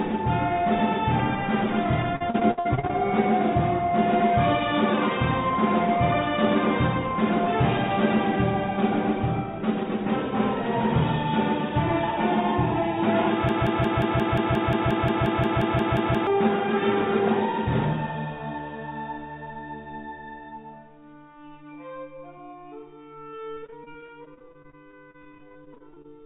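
Audio over a narrowband call path, with nothing above 4 kHz, which fits G.711 A-law. From 2.16 to 2.93 s there's repeated packet loss with a choppy, robotic sound: nine gaps, the longest about 62 ms, each patched by stretching the last sound, so roughly 38% of that stretch is concealed. The same thing returns from 23.30 to 26.06 s with 32 shorter gaps, up to 30 ms, covering about 21%. Between 13.49 and 16.27 s a broken-record loop repeats one 177 ms fragment 16 times back to back, losing whatever should have played there, most likely because the player or stream stalled and kept resending its last chunk.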